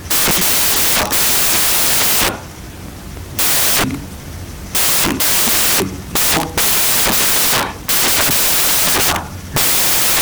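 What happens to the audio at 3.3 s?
At 3.3 s, as everywhere in the clip, the sound is buried under loud, harsh broadband noise because the samples are built from the wrong bytes. The reader assembles each sample's bytes in the wrong order or alignment, so the rapidly changing low bits land in the most significant position. Unlike a separate noise layer mixed over intact audio, this hiss is the signal itself scrambled.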